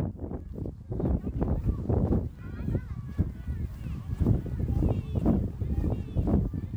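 At 3.84 s a doubled audio track begins and runs to the end of the clip: a second, full-band copy of the sound enters abruptly, trailing the original by about a second and sitting around 5 dB lower. It is likely a second capture via a slower path, or an edit leaving two copies out of step. The copy carries no decay or room colour, so every event is heard twice with a dry, clean repeat.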